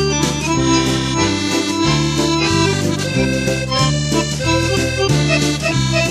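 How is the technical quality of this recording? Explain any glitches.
Nothing here sounds off: there are no glitches to explain, and the recording holds together without any technical trouble at all.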